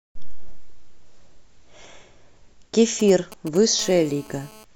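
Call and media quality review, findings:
Galloping dit-dit-dit of short buzzes, 3.0–3.81 s, roughly 15 dB below the speech. GSM signalling bursts: nearby 2G handset's intermittent 217 Hz radio bursts rectified in the audio circuit.

Steady hard, raspy 217 Hz buzz rich in harmonics, 3.81–4.64 s, about 24 dB below the speech. GSM phone buzz: handset in a call, continuous burst transmission rectified into the audio path.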